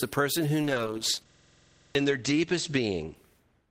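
Right after "person who", at 0.63 s, the speech turns coarse, watery and muffled and stays that way to the end, with the top end cut to about 8 kHz. This is a call bitrate drop: the encoder was starved of bits, which fits a fall from 32 kbps to about 9 kbps, lowest for roughly 1.3 s.

From 1.3 to 1.95 s a rattling buzz at 21.5 Hz replaces the speech, as one 46 ms scrap repeats 14 times. This is a system hang loop: the system froze while the sound hardware kept replaying its ring buffer, which fits a 2048-sample buffer, and around 0.7 s of audio is lost.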